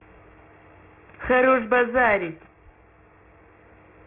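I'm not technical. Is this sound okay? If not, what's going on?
No. From start to finish the speech has a gritty, metallic edge, most noticeable on hissy sounds like s and sh, which come out harsh. This is aliasing. The recording was converted to a much lower sample rate without first removing the high frequencies it couldn't hold. Those highs didn't simply disappear. They folded back below about 3 kHz as new, unrelated tones that mix in with the speech.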